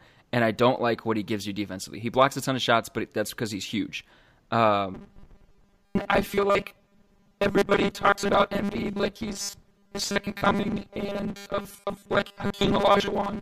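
In this speech recording, from 4.95 s to 13.42 s the voice turns into a rigid, metallic 200 Hz buzz that only loosely tracks the speech. The likely cause is repeated short buffers: around two thirds of the audio is skipped while 5 ms chunks are replayed to cover gaps.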